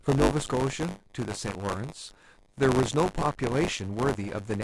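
Buffer tearing throughout: writer and reader cross every 10 ms period, splicing in a tenth of stale audio, heard as a robotic 100 Hz buzz.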